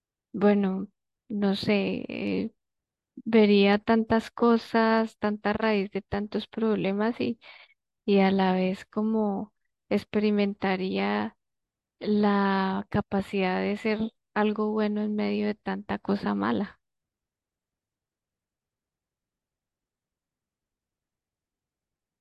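Nothing in this speech recording points to a technical fault. There is no event to place in time and no mechanism to explain.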